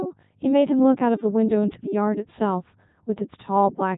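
From start to finish the speech has passed through a Codec 2 vocoder, and the damage is heavy. Rather than keeping the waveform, this codec transmits only pitch, voicing, energy and a coarse spectral envelope, and the decoder rebuilds the voice from a bank of sine waves. The result sounds robotic and buzzy, with nothing above about 3.8 kHz. That level of degradation fits the codec's 3.2 kbit/s mode.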